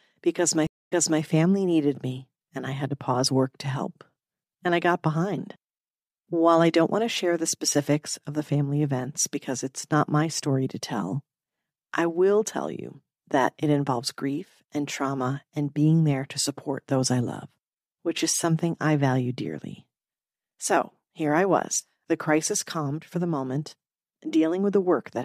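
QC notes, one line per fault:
0.67–1.21 s, stream reconnect: 231 ms silence, then the sound resumes 313 ms earlier before "family needed me and", as the reconnected server resends buffered audio.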